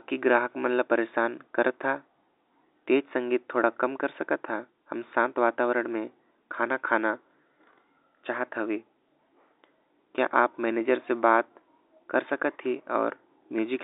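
Speech, with no technical faults to report. It carries the sound of G.711 telephone coding, with the band confined to about 300 Hz to 3.7 kHz and nothing heard above that.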